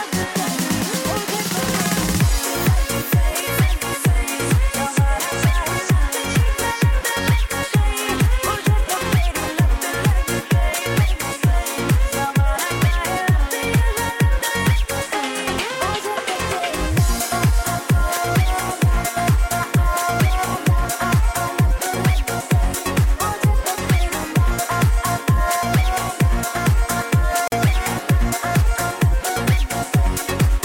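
At 27.48 to 27.52 s, a gap at a join of encoded pieces: about 44 ms of silence from untrimmed encoder delay and padding, with smeared edges, before the sound resumes.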